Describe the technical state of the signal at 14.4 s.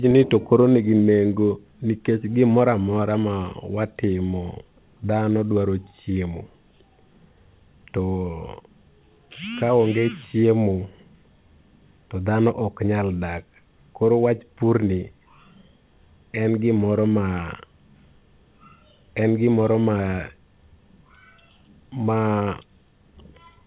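At 14.4 s the speech is intact, with no dropout, glitch or other fault; it comes through the call path as telephone-band audio with nothing above 4 kHz.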